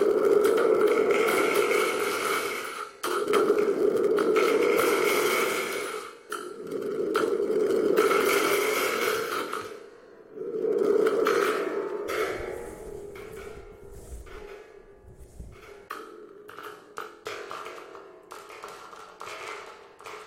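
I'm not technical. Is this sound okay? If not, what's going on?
No. At 12.07 s there is a brief glitch caused by damaged data in a compressed stream: corrupted bytes garble a moment of decoding.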